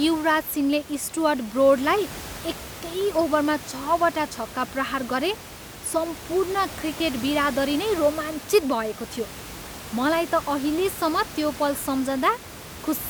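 No technical faults are audible.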